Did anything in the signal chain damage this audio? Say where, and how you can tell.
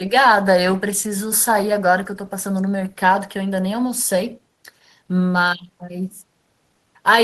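No, nothing along the way seems to have hurt this speech recording, so there's no damaged stage to point to here.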